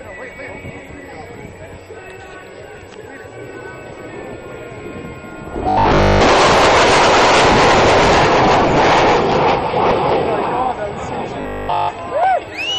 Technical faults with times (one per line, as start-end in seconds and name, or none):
1.13-1.58 DAB burbling
3.91-4.64 DAB burbling
5.69-6.21 robotic sound from repeated short buffers
11.41-11.89 robotic sound from repeated short buffers
12.40-12.55 DAB burbling